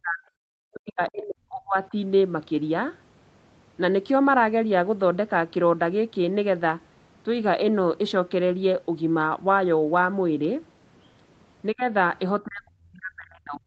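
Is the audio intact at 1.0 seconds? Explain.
No, not at 1.0 s. That moment sits inside a stretch from 0.73 to 1.94 s where the speech gets pushed way down, at its deepest around 40 dB, in chunks adding up to about a second. The likely cause is speech suppressed in double talk: with both ends talking at once, the echo canceller couldn't tell this talker apart from loudspeaker echo and turned everything down, so the voice drops out in pieces there.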